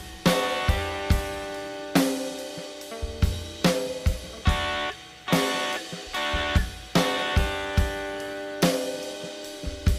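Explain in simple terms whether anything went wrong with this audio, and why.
Nothing went wrong; no problems can be heard.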